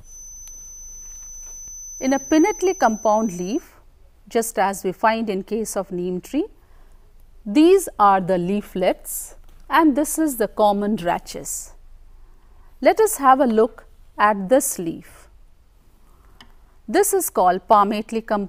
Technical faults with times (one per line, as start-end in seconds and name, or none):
0.00-3.70 feedback whistle